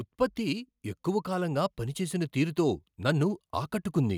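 From 0.35 s to 4.13 s the level climbs steadily by about 6 dB, a case of automatic gain rising: the gain control judged the speech too quiet and kept boosting it, so voice and background swell together. The waveform envelope widens gradually, and the spectrogram brightens evenly across all frequencies.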